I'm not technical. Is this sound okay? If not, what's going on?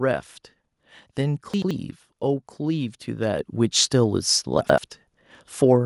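No. At 1.54 to 1.71 s and again at 4.61 to 4.78 s there are chunks out of order: two short slices swap places, giving a brief jumble, but nothing goes missing, unlike a dropout.

At 3.39 s the microphone volume stepped up: the call software turned the microphone up in one jump, so the voice and the background noise get louder together, not just the voice.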